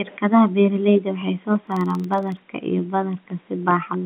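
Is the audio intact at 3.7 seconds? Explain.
Yes, the audio is intact at 3.7 s, carried cleanly through G.711 telephone coding with its narrow telephone band and nothing above 3.5 kHz.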